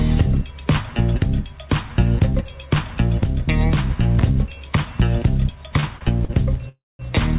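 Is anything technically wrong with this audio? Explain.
Yes, near the end there's a run of late-packet trouble over what sounds like a narrowband call line, with nothing above 4 kHz.

First come three short stalls from late packets, at 5.80, 5.97 and 6.25 s. Each time a packet didn't show up on schedule, the jitter buffer emptied and the receiver held the last sound for 27, 40 and 40 ms. You hear a brief smeared hold with a faint buzz, then the audio picks up where it left off.

Then there's a call audio freeze from 6.69 to 7.01 s. The sound stops moving forward, turns into a fading buzz and then about 200 ms of silence before resuming with nothing lost. That's likely packets getting held up in transit long enough to drain the buffer, so the receiver filled roughly 300 ms with concealment.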